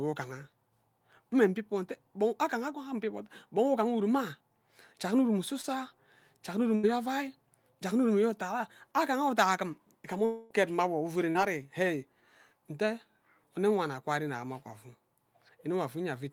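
Just after "jak nne urume", at 5.61 to 5.65 s, and again at 11.30 to 11.37 s, short concealed packet loss leaves brief smears where tens of milliseconds were patched over, too short to fade like longer gaps. After "jak nne", at 6.75 to 6.85 s, a burst of packet loss drops about 80 ms; the continued sound audibly tails off before the audio resumes. At 10.25 to 10.52 s, a fading fill stretches for about a quarter second without reaching silence, then the sound returns at "mma awo". This is likely a long network dropout, much longer than the burst.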